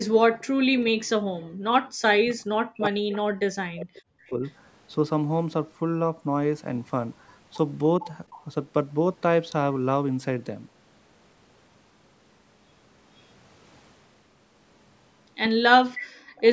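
From 0.34 to 0.44 s a faint delayed copy of the speech returns about 0.41 s late, roughly 30 dB below the talker. This echo leak likely comes from the far end's loudspeaker reaching its microphone, with the echo canceller missing part of it.

From 0.62 to 4.42 s, speech is suppressed in double talk. The talker's level repeatedly falls, dipping by as much as 40 dB. Around 3 s in total is affected. Both sides likely overlapped, and the canceller turned down the talker along with the echo.

Within that stretch, echo leak returns at 3.12 to 3.18 s and 3.97 to 4.52 s, delayed about 0.43 s. It recurs at 8.01 to 8.45 s, delayed 0.46 s, roughly 20 dB down.

From 15.95 to 16.41 s the loudest echo arrives, 0.5 s late and only about 15 dB below the talker. Inside it, from 16.07 to 16.36 s, the background is gated by the echo canceller. The room sound drops by about 35 dB for some 0.3 s, then returns.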